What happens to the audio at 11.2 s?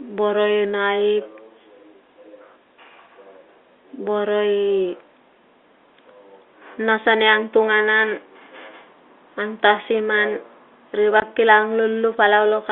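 At 11.2 s a brief hole of about 20 ms appears in the speech: packet loss filled with silence. A stretch of audio never arrived, which fits a single 20 ms packet, and the receiver put plain digital silence in its place. The sound cuts off abruptly and restarts with hard edges. The gap is true silence and its length matches the packet size, unlike concealment, which would smear or repeat nearby sound. Around it, the telephone-band G.711 sound continues as before.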